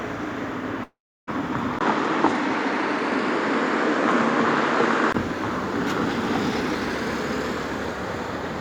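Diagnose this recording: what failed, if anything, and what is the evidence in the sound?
From 0.83 to 1.29 s the sound stops being real. The last moment smears into a fading buzz, and for about the final third of a second only near-silence remains before the audio picks up again with nothing recovered in between. This is most likely a long network dropout. Roughly 440 ms of packets never arrived, so the receiver's concealment stretched the previous sound, then gave up and went quiet.

At 1.79 s there is a brief gap of about 20 ms, and then the sound turns duller and boxier, with nothing above 9.8 kHz. The level shifts by roughly 5 dB, and a new faint noise floor sits far below the signal. It clears at 5.14 s. The likely cause is the input switched to a poorer device at the capture and driver stage, swapping in a microphone with a narrower band and its own level and noise.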